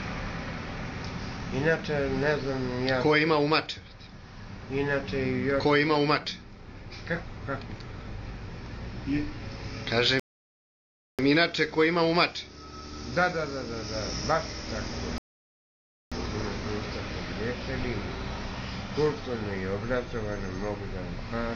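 At 10.20 s and again at 15.18 s, the sound halts in a rebuffering stall, adding about 0.99 s and 0.93 s of silence as playback ran dry and waited for data. It resumes exactly where it stopped, with nothing skipped. The waveform shows flat gaps, and the spectrogram shows blank vertical bands.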